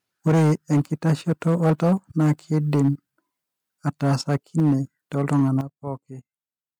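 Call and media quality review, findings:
Microphone overload, 0.27–1.93 s: harsh crackle on loud syllables, peaks about 10 dB over full scale, roughly a tenth of samples clipped. Likely mic input gain set too high, so the converter cuts peak tops. Waveform shows flat-topped peaks; spectrogram shows broadband vertical smearing.
Microphone overload, 2.20–2.89 s: same crackle, about 7 dB over, roughly 7% of samples clipped. Likely excess input gain, converter limit.
Microphone overload, 3.87–4.75 s: about 6 dB over, roughly 5% clipped. Likely converter limiting from high gain.
Microphone overload, 5.16–5.61 s: about 4 dB over, roughly 5% clipped. Likely the same converter clipping, with flat-topped waveform peaks.

Microphone volume stepped down, 0.28 s: sudden level drop of 3 dB, just after overload begins. Likely call software automatically lowering device input gain. Waveform envelope steps down abruptly; spectrogram darkens uniformly across all bands.
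Microphone volume stepped down, 4.60 s: 3 dB step, inside a clipped stretch. Likely automatic gain control reacting to clipping.
Microphone volume stepped down, 5.61 s: 9 dB drop right at the end of the last overload. Likely the automatic gain control's largest correction, visible as a clear step in the waveform envelope.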